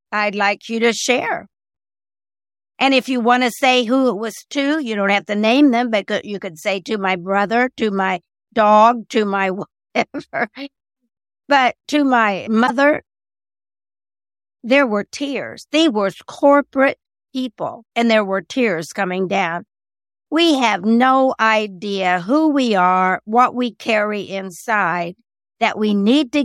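At 12.63 s the speech is interrupted by a brief burst of damaged data in the compressed stream, lasting about 70 ms until 12.70 s. A stretch of the encoded bitstream is corrupt there, so the decoder cannot parse those frames correctly, loses frame sync and resynchronises on a later valid header. The result is a short glitch that briefly replaces the speech before normal playback resumes.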